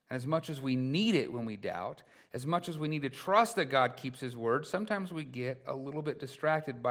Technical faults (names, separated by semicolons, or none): none